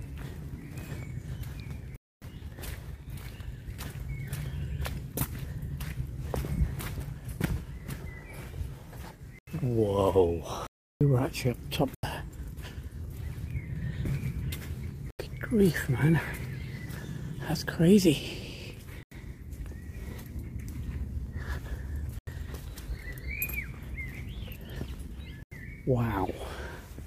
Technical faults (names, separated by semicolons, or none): block of digital silence